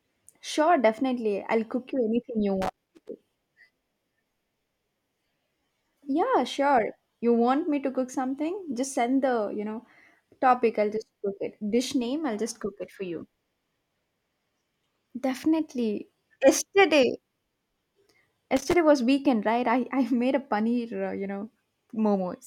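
Speech with loose connector crackle twice: 2.62 to 3.09 s after "cook you anything you", and 18.57 to 18.74 s before "was weekend right I". It's a worn contact chopping the signal.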